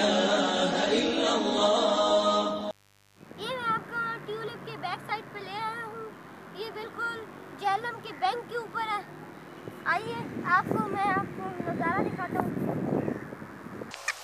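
A steady, raspy buzz sits under the audio for its whole length, well below the main sound at roughly 35 dB down but never letting up. This is mains buzz on a 50 Hz supply: a dimmer, rectifier or poorly shielded cable lets sharp switching spikes into the signal path twice per mains cycle, and those spikes carry a dense ladder of 50 Hz harmonics up into the kilohertz range, which is what gives the hum its gritty edge.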